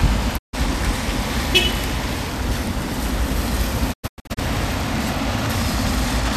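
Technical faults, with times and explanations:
0.37–0.55 s, digital broadcast dropout: the receiver stopped getting decodable frames and muted until valid data returned, so the sound fades out over about 20 ms and leaves a gap of 144 ms, consistent with a short burst of roughly six lost frames.
3.92–4.39 s, digital broadcast dropout: frames failed intermittently across 432 ms, so the receiver muted repeatedly, punching several short holes into the sound, each with a 20 ms fade. They total 288 ms of lost material, and the longest single silence is 96 ms.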